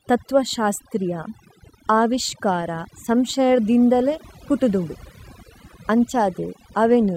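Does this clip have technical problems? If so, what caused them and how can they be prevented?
Yes. Throughout the speech there is overdone noise removal: a noise reducer set too aggressively has pulled individual frequency bands down or out wherever their level came close to its noise estimate. The pauses collapse to near silence sprinkled with twinkling specks, and the softer, low-level parts of the voice are cut along with the noise. Prevention: apply gentler reduction and let some background noise remain.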